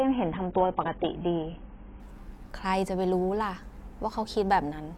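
Adaptive stream starting at a low bitrate: until 2.0 s the player feeds a lean version, cutting the speech off above 3.8 kHz, then it brightens abruptly without a gap.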